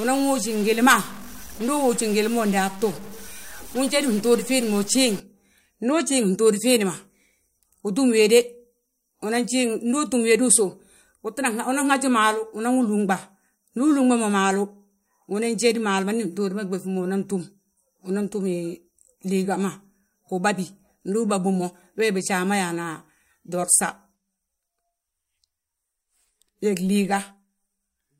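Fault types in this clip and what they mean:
Stuck bit: Over roughly the first 5.2 seconds the speech carries a harsh, buzzy distortion, and the pauses between phrases are filled with a gritty noise floor instead of falling quiet. The likely cause is a single sample bit held fixed at 0 or 1, so about half the samples land off by that bit's weight, about -35 dBFS. Near silence the error flips with the waveform's sign, so the gaps fill with noise.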